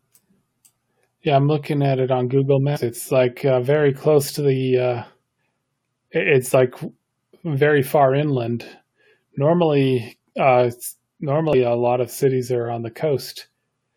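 At 11.53 to 11.55 s the speech is broken by a brief glitch from damaged data in the compressed stream. Corrupted bytes there make the decoder misread the frame and lose sync, and it hunts for the next valid frame header.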